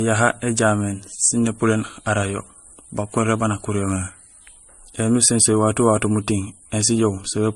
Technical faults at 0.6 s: transcoding between lossy codecs

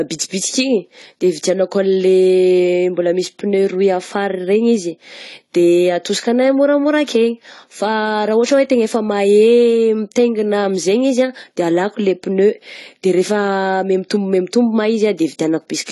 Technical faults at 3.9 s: AAC compression

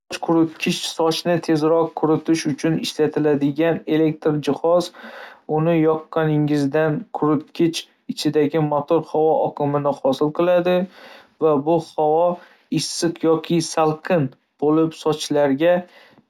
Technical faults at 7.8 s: imaging from linear upsampling

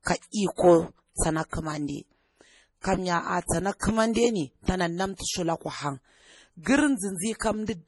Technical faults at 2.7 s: MP3 compression

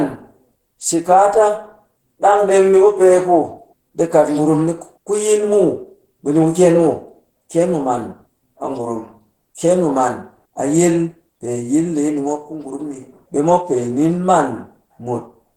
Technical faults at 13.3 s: Opus compression

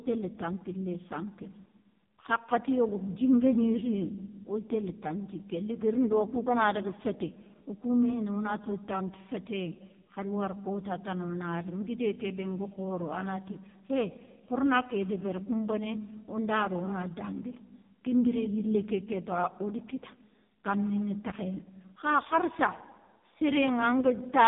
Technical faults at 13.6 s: AMR narrowband mobile codec

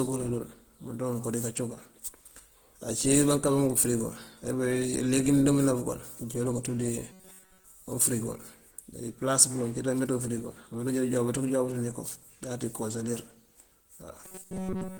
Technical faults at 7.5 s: Opus compression; robotic sound from repeated short buffers

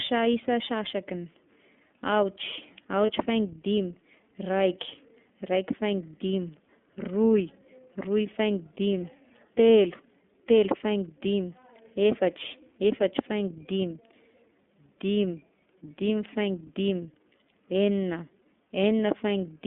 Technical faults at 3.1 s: iLBC codec; lost iLBC frames

